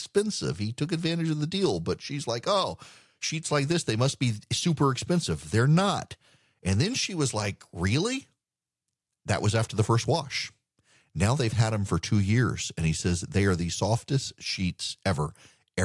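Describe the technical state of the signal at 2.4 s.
At 2.4 s the speech signal is intact, with no audible dropout, distortion, or other fault at that moment.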